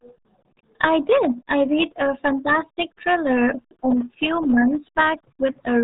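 Speech carrying heavy RealAudio 14.4 codec damage throughout: muffled, gargly, with nothing above 3.8 kHz. That fits an 8 kbit/s dial-up stream, and a spectrogram shows a flat ceiling with blotchy, smeared harmonics below.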